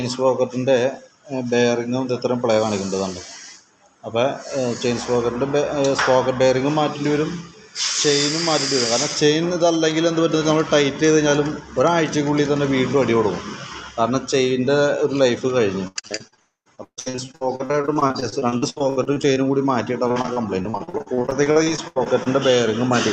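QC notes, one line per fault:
15.87–16.39 s, 16.75–19.38 s, 20.08–22.28 s, repeated packet loss (robotic sound): choppy stutter with pieces missing. Audio stopped arriving again and again in short holes, each up to 80 ms (138 ms in the middle run). The receiver patched each hole by extending the preceding sound, covering about half of the first stretch and about a third of the later two.
16.39–16.67 s, long network dropout: the sound smears into a fading buzz and then falls to silence for about 0.16 s. It resumes further on with that stretch gone, likely because the network delivered nothing for over a quarter of a second.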